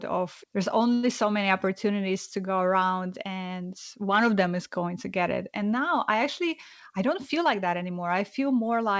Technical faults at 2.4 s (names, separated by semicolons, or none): none